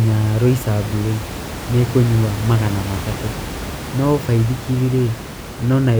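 No technical faults can be heard anywhere in this speech.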